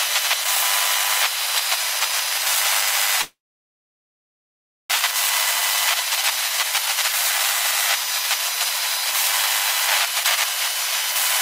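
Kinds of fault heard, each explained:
Long network dropout: at 3.21 s the sound decays into a brief fading buzz, then falls silent for about 1.5 s until 4.98 s, likely a stalled stream. Playback resumes with about 1 s skipped. Waveform: tapering stub, then flat line. Spectrogram: blank gap.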